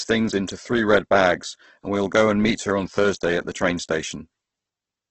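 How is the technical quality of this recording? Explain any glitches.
The technical quality is poor. Heavy Opus compression runs throughout: grainy, rough speech with nothing above 8.2 kHz, likely from a low-rate encode near 12 kbps. Unlike MP3 swirl, starved bands are filled with noise, leaving texture rather than holes.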